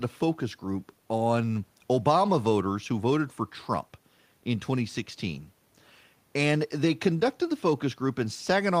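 Nothing in the way of technical faults turns up anywhere in this speech recording, so there's no timeline of problems to walk through here.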